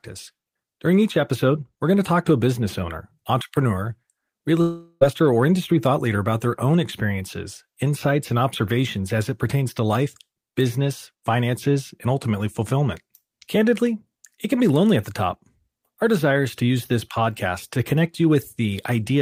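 It's a speech clip with one long network dropout, from 4.61 to 5.03 s. Right after "business owner entrepreneur real" the sound smears into a fading buzz for about 0.4 s, then picks up at "or industry thought leader" with that stretch gone, likely lost packets concealed by the receiver.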